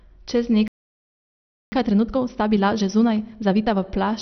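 Speech, and heavy MPEG Layer II (MP2) compression, likely at too low a bit budget, runs through the whole clip: starved of bits at a rate around 48 kbps, the encoder shuts off its upper sub-bands, and the remaining bands are coarsely quantised into a dull, gurgling, granular texture. At 0.68 s the player likely ran out of data or was blocked, a playback stall that silences the output mid-flow for about 1.04 s until it resumes at 1.72 s. To clear the resulting backlog, the player then applies time-compressed catch-up from 1.72 to 3.8 s, cutting and cross-fading small slices so the speech runs about 1.5 times faster at unchanged pitch, sounding hurried.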